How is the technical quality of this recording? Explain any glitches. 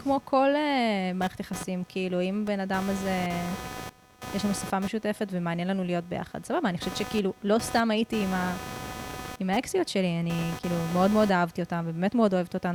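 The recording has one persistent flaw. Computer activity noise runs throughout the speech: a buzzing, chirping pulse near 300 Hz, roughly 15 dB below the voice, from computer load changes disturbing the shared audio ground. Unlike steady mains hum, it fluctuates with computer activity.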